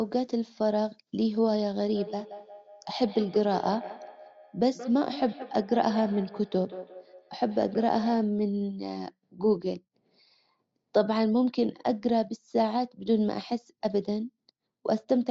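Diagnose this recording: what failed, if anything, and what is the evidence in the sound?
From 1.88 s to 8.42 s the speech returns at a steady interval of about a fifth of a second, with the loudest repeats about 14 dB below the direct sound. This is feedback echo between two devices, a failure at the call-processing stage: a second device in the room plays the call out, and the first microphone picks it up again. Its own echo canceller cannot remove playback it never produced. On a spectrogram, faint copies of each syllable trail at evenly spaced offsets. All of it, copies included, sits below 8 kHz.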